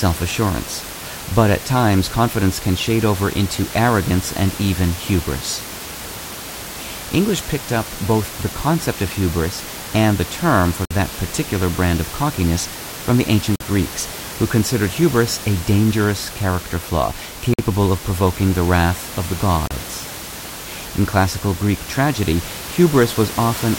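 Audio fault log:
10.85–10.91 s, 13.56–13.60 s, 17.54–17.59 s, 19.67–19.71 s, Bluetooth stall: the speech drops to dead silence for about 33 to 54 ms each time, after "term for", after "of cockiness from the", and between "a dangerous character flaw" and "of provoking the wrath", then picks up again with the room noise about 13 dB under the speech. The likely cause is interference delaying packets, so the headphones' buffer emptied and playback waited for the resends.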